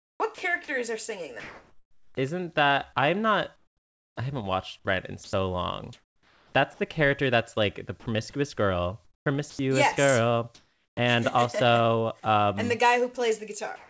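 A speech recording carried over a call path whose audio stops at 8 kHz, which fits a G.722 wideband codec, shows three related voice-detector faults. Sound chopped by the voice detector occurs from 0.00 to 2.15 s and from 9.05 to 9.59 s, just before "yes girl and". Speech and synthetic fill alternate repeatedly, likely from a detector toggling transmission on and off. Comfort noise in place of the background appears at 3.56 to 4.16 s, just before "I haven't watched", where it is about 10 dB quieter, and again at 5.24 to 6.53 s, 10.55 to 10.97 s (about 2 dB louder) and from 13.76 s to the end. Only pauses are affected, with a steady, featureless hiss likely standing in for the real room tone. Sound dropped by the voice detector occurs at 5.24 to 5.33 s (90 ms) and at 8.00 to 8.06 s, just after "character that's like the". Unlike chopping, each is a single short gap where the sound gives way to noise, likely because the detector mistook it for background.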